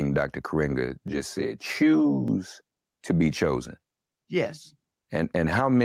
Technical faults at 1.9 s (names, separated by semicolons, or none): gain pumping; channel delay (comb filtering)